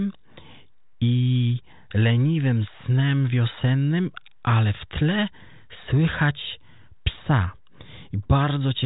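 No technical faults can be heard in the recording. The speech comes through a G.726 ADPCM path at 40 kbit/s, whose coding noise is at most faint, and nothing above about 3.8 kHz gets through.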